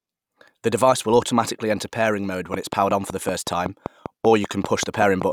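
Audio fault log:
2.54–5.23 s, train of clicks: just after "enter pairing mode when", some fifteen identical pulses tick at an even 5.2 per second, peaking around 15 dB over the speech. Unlike random crackle, they keep one shape and pace through pauses, likely interference from nearby equipment.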